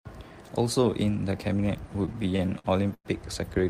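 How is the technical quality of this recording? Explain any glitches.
The recording has one glitch: repeated stalls (stutter) between 1.93 and 3.07 s. Over a dozen brief holds, the longest about 105 ms, stretch that passage as late-arriving packets drained the jitter buffer and the receiver extended the last sound. Roughly a quarter of that span is filled in, so speech drags and hiccups without dropping anything. On a spectrogram the concealed patches appear as smeared, horizontally stretched bands; the waveform shows repeated cycles, sometimes tapering in level.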